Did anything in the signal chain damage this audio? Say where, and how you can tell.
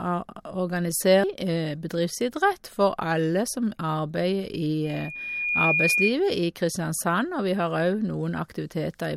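Yes. Between 4.84 and 6.14 s a loudspeaker feedback squeal enters at the analogue acoustic stage, where the microphone hears the loudspeaker it drives. A single 2.4 kHz tone swells over roughly 0.7 s until it stands around 5 dB above the speech. That growth is the loop's gain exceeding one at that frequency. On a spectrogram it shows as one bright horizontal line that thickens as it rises, and the waveform envelope swells smoothly across that span.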